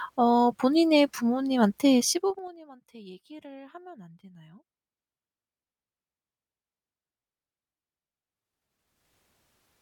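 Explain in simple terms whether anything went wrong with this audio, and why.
Zipper noise appears from 2.05 to 2.56 s, as the speech is turned down sharply. Instead of gliding, the volume drops in coarse jumps, about ten a second, and each jump leaves a tiny click, so you hear a brief ticking or zipping on the speech.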